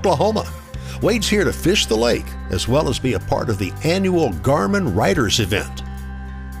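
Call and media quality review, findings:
Audio missing between chunks at 2.81 s and 5.79 s, about 3.0 s apart. Likely cause is the capture or processing stage dropping a brief sliver, around 15 ms, while closing one 3-second block and opening the next, then butting the two edges together. Symptom: a short skip in the sound at each point, with no gap of silence, repeating at the block interval.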